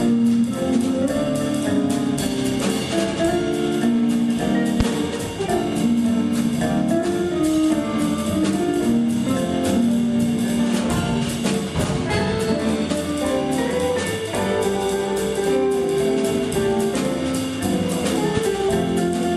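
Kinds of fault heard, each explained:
Loud pop: single pulses at 4.80 s and 18.37 s, about 15 dB above the sound, likely a voltage step. Tall waveform spikes, full-height spectrogram lines.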